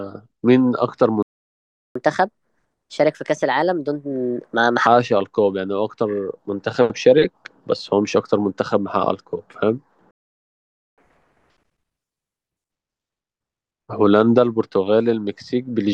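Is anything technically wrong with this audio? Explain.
Yes, the speech drops out twice. Playback stalls go silent from 1.23 to 1.95 s and 10.11 to 10.98 s, most likely because the player starved for data.

After each stall comes catch-up at higher speed. The backlog plays faster at 1.25x (1.95 to 4.87 s, about four semitones up) and then at 1.5x (10.98 to 12.72 s, about seven semitones up), so it sounds chipmunky until it settles back.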